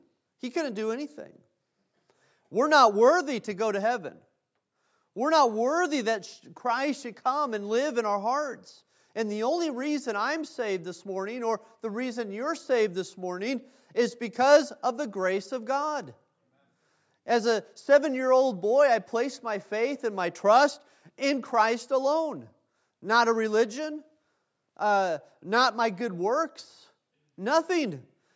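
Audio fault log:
The speech signal shows the ordinary shaping of call microphone processing, with the lowest bass trimmed by its high-pass filter and nothing present above 8 kHz, and no faults are present.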